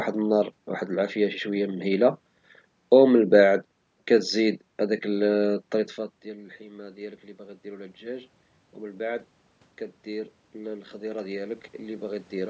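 It's a speech clip, and the fault is automatic gain rising, which happens twice. From 4.82 to 9.27 s the level dips by about 21 dB as the talker moves away from the mic around 5.5 s. The gain control then slowly adds about 8 dB, so the voice and room noise swell up together. From 10.05 to 12.45 s it pumps up another 5 dB or so. The call's mic processing tops out at 8 kHz, as expected.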